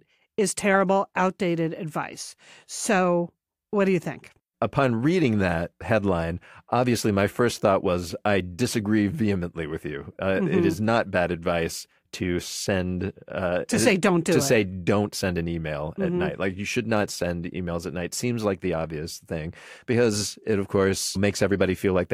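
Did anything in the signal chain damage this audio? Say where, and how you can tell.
No, nothing along the chain from capture to playback has left an audible mark on this speech recording. Listening through it, no stage betrays itself with a defect at any point.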